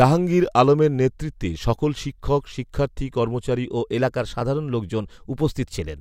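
A clock-matching stage likely stepped its playback rate about 6% faster to correct drift in this speech clip, a drift correction step running from 3.65 s to 5.96 s, just after "সকল শিক্ষক শিক্ষার্থী কর্মচারী". Speed and pitch rise together by about 105 cents, roughly a semitone.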